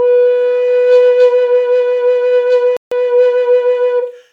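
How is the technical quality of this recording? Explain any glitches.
The music has one audible glitch, a gap in playback. From 2.77 to 2.92 s the music drops to complete silence for about 150 ms and then resumes. The likely cause is a Bluetooth stall: radio interference delayed packets on the wireless link, the headphones' buffer emptied, and playback halted until the missing data arrived. A clipped transient or a masked packet-loss blip would be a brief click or smear. This is a clean, sustained gap of true silence.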